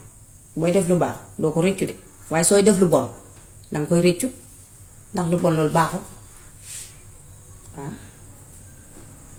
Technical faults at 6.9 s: transcoding between lossy codecs

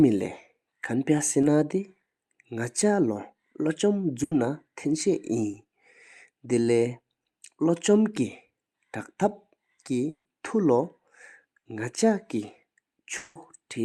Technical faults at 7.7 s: none

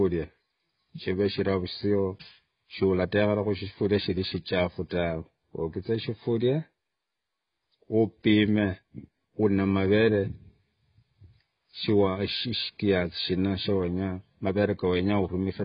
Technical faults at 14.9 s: AAC compression

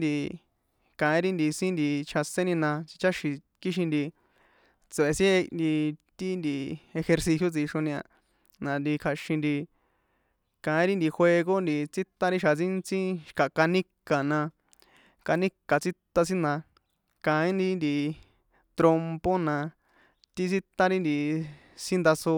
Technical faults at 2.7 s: none

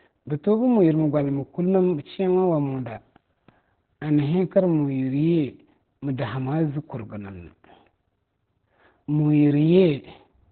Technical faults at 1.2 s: Opus voice compression

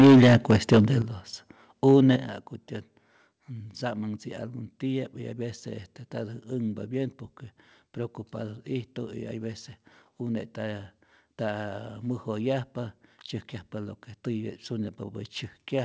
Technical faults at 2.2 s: microphone volume stepped down

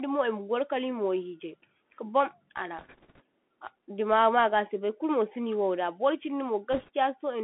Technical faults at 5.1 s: Bluetooth CVSD headset codec

